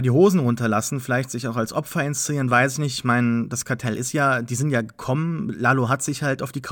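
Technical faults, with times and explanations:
No technical faults can be heard; the speech signal stays continuous and stable throughout.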